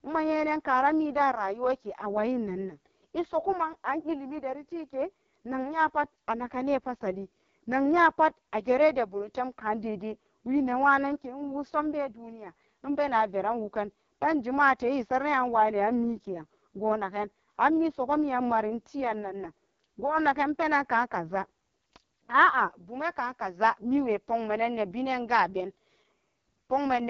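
AMR wideband (HD Voice) codec throughout: a pulse-driven speech model starved of bits leaves the speech rough and raspy, fitting the lowest 6.6 kbit/s mode, with nothing above 7.6 kHz.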